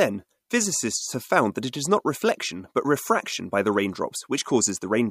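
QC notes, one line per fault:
Nothing stood out on listening to the speech in this clip.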